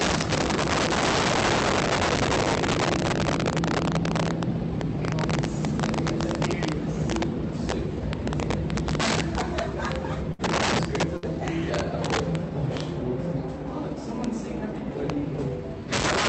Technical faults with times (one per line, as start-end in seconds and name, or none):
0.00-16.28 integer overflow
10.33-10.42 burst of packet loss
11.17-11.25 burst of packet loss